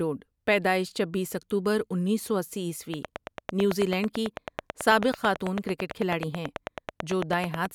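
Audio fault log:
2.94–7.66 s, train of clicks: just after "اکتوبر انیس سو اسی", a steady ticking starts over the speech and runs almost to the end of the clip, about forty near-identical clicks at a regular 9.1 per second, each peaking roughly 15 dB above the speech and audible in the pauses as well. The even spacing and matching shape set it apart from random crackle or scattered pops, and most likely come from interference from nearby equipment or a faulty connection or power supply.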